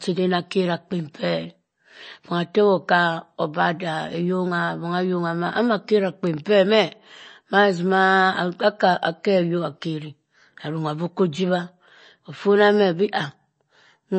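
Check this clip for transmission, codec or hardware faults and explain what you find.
One fault runs through the whole clip: MP3 compression. A bit-starved encode, likely MP3 and consistent with about 32 kbps, removed everything above 8.3 kHz and switched weak frequency lines on and off, leaving the speech dull, watery and swirly.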